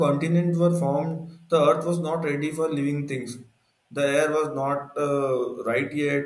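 No technical faults can be heard anywhere in the recording.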